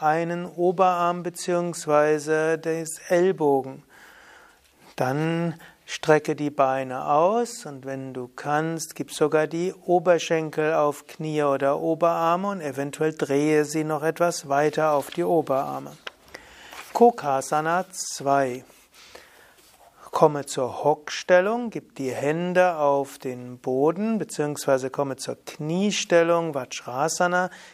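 No technical faults can be heard anywhere in the recording; the signal stays steady and intact throughout.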